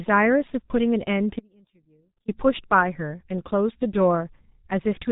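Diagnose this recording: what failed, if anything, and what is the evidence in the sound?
The speech sounds muffled and hoarse throughout, with smeared consonants and no content above 3.8 kHz. This is heavy G.723.1 codec damage at the codec stage. Its 30 ms frames and slowly updated voice model, at a rate that fits about 6 kbit/s, blur fast articulation.

From 1.39 s to 2.28 s the speech cuts out abruptly for about 0.89 s, leaving only a faint residue roughly 30 dB below normal level, then snaps back. This is an audio dropout to a faint residue, likely from a loss upstream while the downstream path stayed live.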